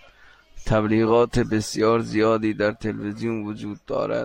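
No technical faults can be heard anywhere in this speech recording. There is nothing at any point in it that calls for a timestamp or a diagnosis.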